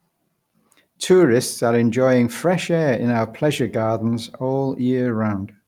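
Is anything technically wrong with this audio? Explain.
No, nothing technically wrong can be heard here.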